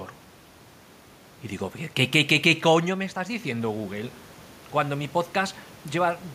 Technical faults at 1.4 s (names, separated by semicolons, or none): none